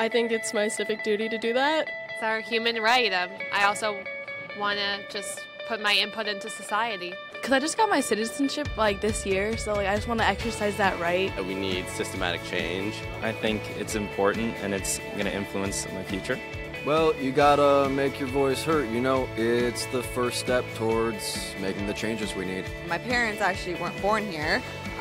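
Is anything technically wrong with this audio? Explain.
No, nothing technically wrong turns up anywhere in this audio.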